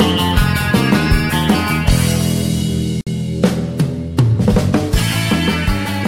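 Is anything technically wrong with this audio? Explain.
Yes. At 3.01 s, a gap at a join of encoded pieces opens a gap of about 57 ms. Untrimmed encoder padding causes it. Sound resumes where it stopped.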